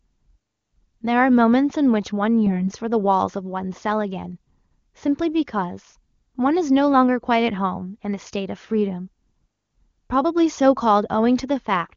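No technical faults are audible.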